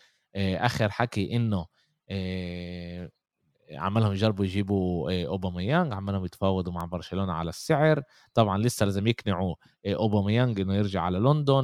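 A bit error spike occurs at 6.81 s: a single sample had one bit flipped in memory or on a digital link, so its value leapt by a power of two, peaking at about -18 dBFS, then returned. It sounds like one sharp, broadband tick unrelated to the speech.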